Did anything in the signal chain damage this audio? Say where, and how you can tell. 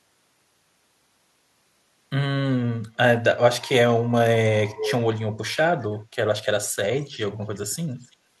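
Yes, an echo leak in call processing: a delayed copy of the speech returns at 4.76–4.93, 5.81–5.85, 7.0–7.17, 7.55–7.59 and 7.97–8.16 s. It is likely that the far end's echo canceller failed to remove its loudspeaker's output from its microphone. The first burst is nearly as loud as the speech; later scraps are faint. Room reverberation would be a smooth decaying tail. Each of these is instead a discrete copy at a fixed delay of about 0.32–0.33 s.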